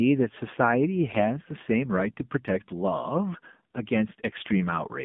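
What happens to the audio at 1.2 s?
From 1.10 to 1.19 s, AMR bit errors flip the weaker bits of about three frames. Misplaced pulses and skewed gains make the voice briefly hoarse, scratchy and gargly. Throughout, the AMR narrowband mobile codec limits the sound to about 150 Hz to 3.6 kHz. Its plainly buzzy, synthetic character fits a low mode near 7.4 kbps.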